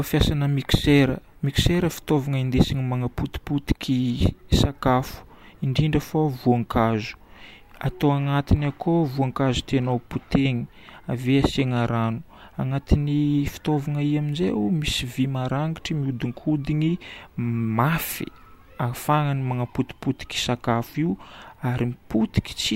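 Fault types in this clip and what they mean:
No technical faults are present.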